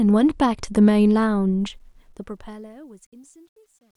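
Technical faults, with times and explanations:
1.6 to 3.96 s: truncation distortion on a fade. As the fade-out that starts around 1.6 s drops toward the smallest level step, the speech turns gritty and, from 2.78 s to the end, is at its worst. Undithered quantisation is squaring off the waveform, which fits a fade stage keeping only about 11 bits.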